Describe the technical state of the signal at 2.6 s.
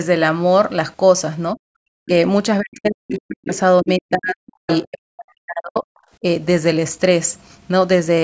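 At 2.6 s the speech falls away, staying suppressed until about 3.51 s and dropping by roughly 40 dB at its deepest. That is likely speech suppressed in double talk: the echo canceller, facing simultaneous talk, ducked the near talker along with the echo. It sinks and recovers in level, unlike a clean packet-loss gap.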